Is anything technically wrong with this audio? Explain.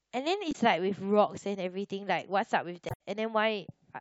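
Yes. Damaged data in the compressed stream at 0.49 to 0.56 s and 2.86 to 2.97 s leaves the decoder misreading frames and hunting for sync, producing brief glitches in the speech.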